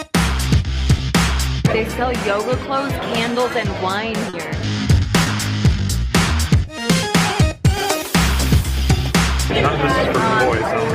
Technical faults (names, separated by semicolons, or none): short concealed packet loss